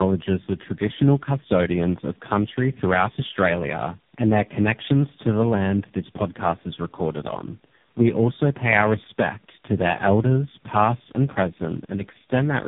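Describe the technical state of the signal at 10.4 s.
At 10.4 s the speech sounds rough, muffled and warbly, with nothing above about 3.7 kHz. This is tandem speech coding, and it runs through the whole clip. The audio appears to have been decoded and re-encoded by three low-rate speech coders in a row, which fits AMR-NB at both ends with an ADPCM stage between them. Each coder compresses the previous one's already damaged output, so the distortions build up.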